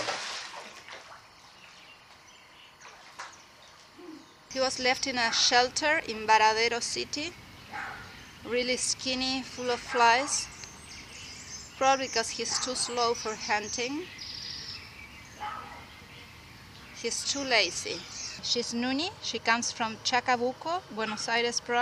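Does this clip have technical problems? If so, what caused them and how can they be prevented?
Yes. Timecode bleed runs throughout, a chirping warble around 1 and 2 kHz, roughly 30 dB below the sound. It is 25 fps linear timecode leaking in from a neighbouring track or cable. Prevent it by keeping timecode on separated, shielded lines away from audio.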